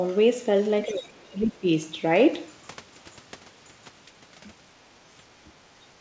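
From 0.86 to 1.09 s a faint second voice sits well beneath the speech. This is the other side's voice leaking through, likely loudspeaker echo the canceller failed to remove. Unlike background talk in the room, it is brief.

Over the same onset, from 0.86 to 1.68 s, the talker's own speech sinks across most of that stretch, by roughly 20 dB at its deepest. A shorter, shallower dip of about 10 dB follows at 5.39 to 5.49 s. This is speech suppressed in double talk, likely the canceller turning everything down while both sides overlapped. Packet loss leaves gaps or repeated fragments, but here the voice is pushed down instead.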